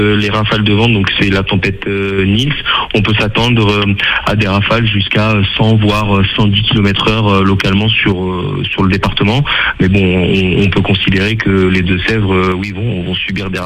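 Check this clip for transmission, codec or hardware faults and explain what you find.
Three abrupt level drops stand out, at 1.82 to 2.18 s, 8.12 to 8.80 s, and from 12.52 s to the end. Each time the sound falls by about 6 dB, then snaps back at the first two. This is likely one channel drops out: with one stereo channel briefly lost, the mono sum keeps only half of the shared content, so everything dips together, and anything present only in the missing channel vanishes.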